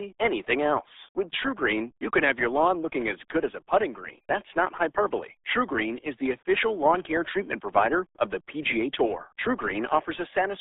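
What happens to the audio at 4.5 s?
At 4.5 s, as throughout the clip, the speech has passed through the RealAudio 14.4 codec, with heavy coding damage that fits a rate around 8 kbit/s. The band is squeezed to roughly 300 Hz to 3.6 kHz, with nothing above 3.8 kHz, so the voice sounds muffled and gargly.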